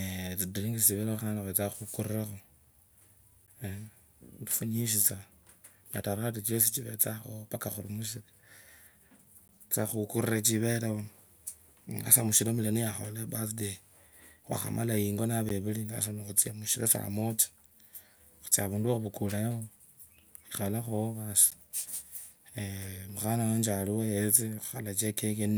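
Speech was delivered in 6-second chunks with a gap between chunks of about 13 ms, leaving hard-edged silent holes at 3.46, 9.48, 15.49 and 21.50 s.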